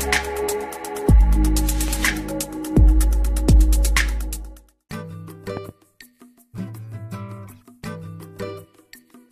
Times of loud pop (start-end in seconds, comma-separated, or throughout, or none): 1.88-1.90, 5.57-5.71